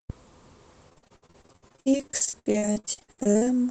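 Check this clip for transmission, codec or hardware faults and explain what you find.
One transmission fault is present: repeated packet loss, giving the speech a robotic sound from 0.89 s to 3.45 s. Across that span, 39 separate gaps open in the stream, the longest lasting 71 ms. Each time audio fails to arrive, the receiver stretches the last sound it had to cover the hole, and nearly half of the span ends up concealed this way. The speech turns choppy and robotic, with pieces missing throughout. The top end is capped near 8 kHz, which fits an Opus call link at about 20 kbps.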